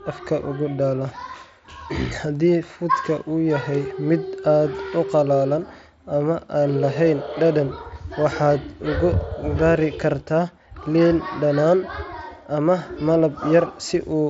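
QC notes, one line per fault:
No faults are present; the speech runs over a Bluetooth mSBC headset link at about 61 kbps, which leaves a light grain on louder passages and nothing above 7.7 kHz.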